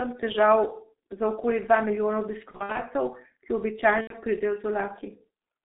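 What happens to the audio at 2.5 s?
VoIP packet loss concealed by the speech codec runs from 2.51 to 2.82 s, just after "za okoli dva milijona". About 150 ms of audio is missing, scattered over 240 ms, with the longest gap 60 ms, which fits five lost 30 ms frames. The decoder fills each gap by repeating its last pitch and filter at falling gain, so the sound smears into a fading buzzy tone or coloured noise and stays weak or distorted until normal decoding recovers.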